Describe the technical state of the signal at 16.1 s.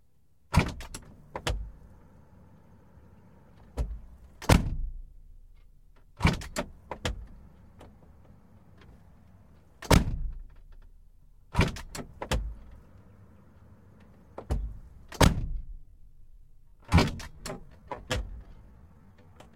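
At 16.1 s the audio sits inside a time-stretched section running from 15.57 s to 19.56 s. It plays at about 0.68 times normal speed with the pitch unchanged. It sounds dragging. The likely cause is software repeating short pieces to lengthen it.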